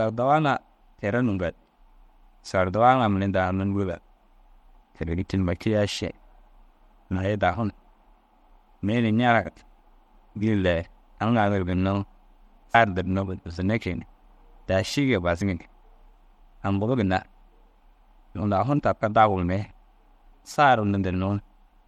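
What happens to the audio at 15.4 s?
At 15.40 s the sound jumps ahead: compressed frames were skipped, so a short stretch of audio never gets played. The gap is about 50 ms, which fits two dropped frames of 26.1 ms each. The decoder just carries on from the next good frame. Because MP3 frames overlap at their edges, the join comes across as a quick smeared blip or hiccup in the speech rather than a sharp click.

That moment also carries the coding damage heard across the whole clip. There's a watery, swirly texture with some metallic chirping on s sounds. That's likely MP3 compression at a low bitrate, around 64 kbps. The encoder runs short of bits and lets weaker frequency components flicker on and off between frames.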